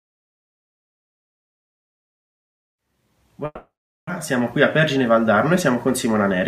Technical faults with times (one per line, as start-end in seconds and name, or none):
3.45-4.11 long network dropout
4.19-6.41 jitter buffer speed-up